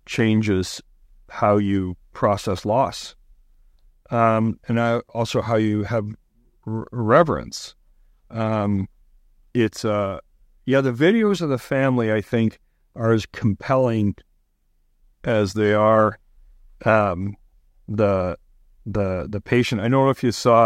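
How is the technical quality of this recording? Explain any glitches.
No glitches or faults are audible.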